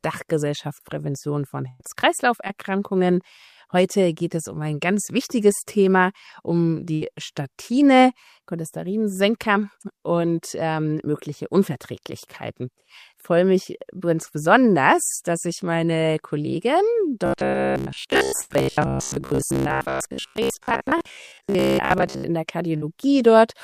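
At 1.68 s and 6.94 s, bursts of packet loss leave the receiver without audio for 110 and 70 ms. It carries the last sound on and fades it, and playback then resumes further along with that stretch gone.

From 17.26 to 22.24 s, new audio likely arrives too seldom, so roughly 15 ms of material is replayed over and over in place of what should follow. The result is robotic sound from repeated short buffers, with most of the passage made of repeats and locked to a rigid, metallic 66.8 Hz buzz. Within it, at 18.41 s, another loss burst drops 100 ms. A final burst at 22.76 s drops 50 ms, held and faded the same way.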